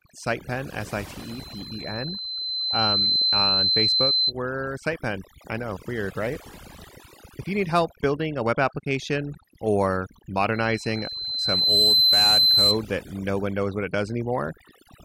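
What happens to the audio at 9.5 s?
At 9.5 s the speech sits over a near-silent background flecked with twinkling specks. This is overdone noise removal, present throughout the clip: an overly aggressive reducer is muting frequency bands it judges close to noise, taking quieter parts of the voice along with them.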